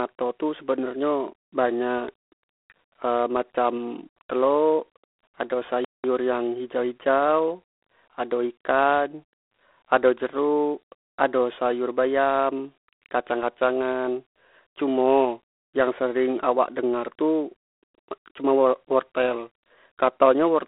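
The clip is speech carried over a G.726 ADPCM telephone link. The band runs from about 300 Hz to 3.5 kHz, and nothing passes above 3.9 kHz, so the sound is thin and boxed in. A harsh, rasping hiss rides on the speech and rises and falls with its level. That grain fits the 24 kbit/s mode, where each sample keeps only three bits of difference from the codec's running prediction. The damage is plainly audible throughout. There is also a playback stall from 5.85 to 6.04 s. The sound cuts out mid-flow for about 195 ms of silence and then carries on. The likely cause is the player running short of data or its thread being blocked until it caught up.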